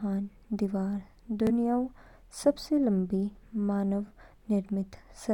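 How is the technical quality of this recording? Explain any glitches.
Two Bluetooth stutters occur, at 1.47 s and 4.07 s. Each lasts about 0.04 s. A packet arrived late or was lost, so the receiver replayed its last slice of about 21 ms. That fits one lost frame. Each stutter gives a brief repeat, and then the speech skips ahead.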